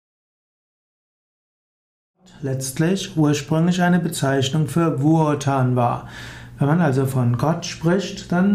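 Nothing is technically wrong with this audio, and the gentle fade-in that settles at about 2.78 s is a normal edit.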